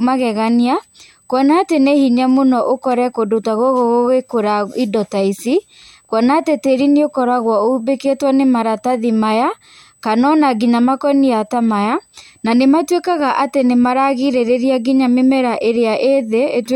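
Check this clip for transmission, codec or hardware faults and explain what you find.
One hardware fault runs through the whole speech clip: USB whine, a steady tone at 8 kHz sitting roughly 40 dB below the speech. USB 125-microsecond microframes pull current in bursts, and that ripple leaks through power or ground into the audio path as a thin, fixed-pitch whistle.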